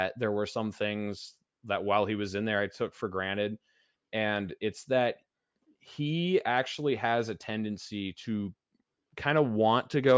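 No technical faults can be heard anywhere in this speech recording. There is no moment in the audio that stands out as a problem.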